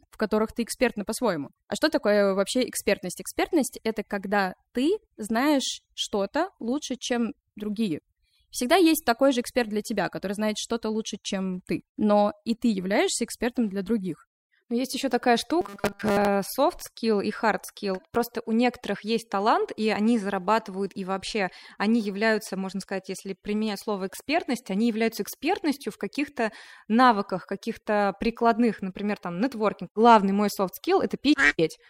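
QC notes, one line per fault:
15.61–16.27 s, robotic sound from repeated short buffers: audio likely arriving too seldom, so 5 ms chunks repeat through most of the stretch, imposing a metallic 200 Hz buzz.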